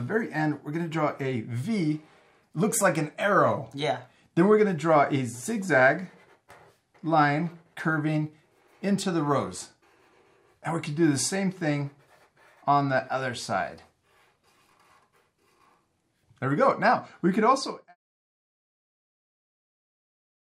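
No technical faults can be heard in the signal, and the smooth fade-out near the end, beginning at about 17.5 s and finishing by 17.96 s, tapers the level off gradually, as an editor would.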